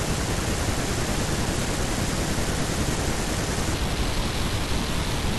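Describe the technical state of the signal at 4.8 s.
At 4.8 s the speech sits inside a section at the wrong speed, running from 3.74 s to the end at 5.38 s. It plays at 0.557 times its recorded rate. Pitch falls about ten semitones and timing drags. The likely cause is a mismatched playback clock.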